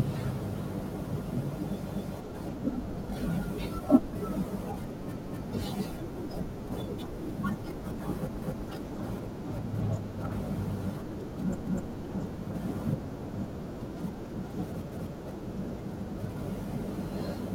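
Chunks of about 3 s overlap by 250 ms, so each join replays a quarter-second of speech as a stutter at 1.92, 5.17, 8.42, 11.67 and 14.92 s.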